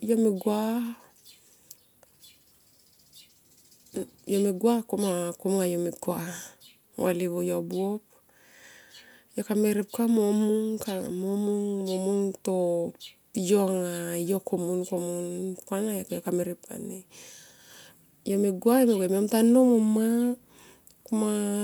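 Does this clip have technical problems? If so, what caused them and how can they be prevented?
No, the speech signal shows no audible technical faults anywhere in the recording, so there is nothing here that needs a cause traced or a prevention step.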